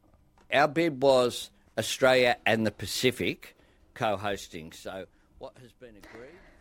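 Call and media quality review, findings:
Sample clock jitter, 1.26 to 5.26 s: hiss and roughness riding on the signal, strongest on loud, bright passages and gone in gaps. Converter clock wandering by a few microseconds, error roughly 30 dB down. Spectrogram: broadband haze tracking high-frequency energy.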